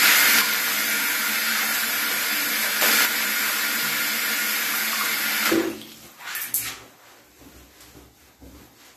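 From 0.41 s to 2.81 s, the level suddenly falls by about 6 dB, then returns. It happens again from 3.05 s to 5.45 s. Both drops have hard edges and last 2.4 s each. This is a one channel drops out fault, likely one stereo channel going silent. When the channels are summed to mono, content shared by both loses half its level. Anything carried only by the lost side vanishes until it returns.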